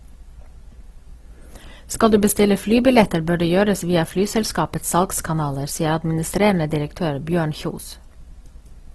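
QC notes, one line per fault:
throughout: Opus compression, likely music-mode at around 16 kbps, fills starved bands with noise; speech turns grainy and rough, nothing above 12.4 kHz.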